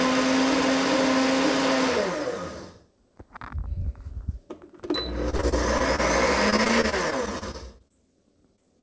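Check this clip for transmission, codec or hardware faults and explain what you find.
Two kinds of transmission fault appear, both from packet loss on a call path whose content stops at 8 kHz, which fits G.722 at 64 kbps.

Repeated packet loss (robotic sound), 5.30–6.00 s and 6.50–7.92 s: six and then thirteen short holes, the longest about 31 ms, were each patched by extending the preceding audio. About a fifth of the first stretch and a sixth of the second is synthetic, giving a choppy texture with fragments missing.

Short concealed packet loss, 8.56–8.60 s and 8.80–8.82 s: brief chunks of about 20 and 40 ms arrived too late, and the receiver bridged them by continuing the last sound before blending back, heard as a quick smear or wobble near the end.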